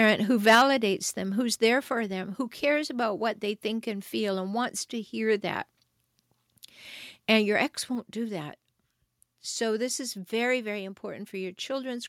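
Right at the top of this speech clip there's microphone overload. From 0.02 to 0.1 s the peaks push about 1 dB past the converter's limit, with a small share of samples flattened. From 0.47 to 0.62 s it's much worse, roughly 9 dB over with around a tenth of the samples sheared off, and the loudest syllables come out harsh and splintered. The likely cause is an input level set too high for the converter, so the waveform tops get squared off at its ceiling. You can also hear the microphone volume stepped down twice, as an abrupt drop in voice and background together. The first is about 3 dB at 0.55 s, in the middle of that bad clipping, and the second is about 4 dB at 7.95 s. It's likely the call software's automatic gain control pulling the device's input volume down in a single notch after it detected a level that was too hot.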